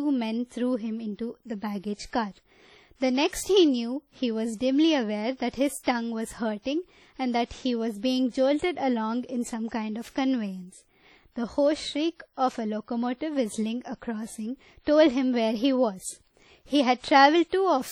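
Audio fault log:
Throughout, WMA compression: the speech carries a washy, ringing quality, with a hiss that swells and fades along with the voice. This points to a transform codec that likely ran long blocks, spreading quantisation noise over tens of milliseconds, while a starved bit budget zeroed weaker spectral lines. The damage fits a low bitrate around 32 kbps. The band still reaches about 20.1 kHz, so the harm comes from coarse quantisation rather than a lowpass.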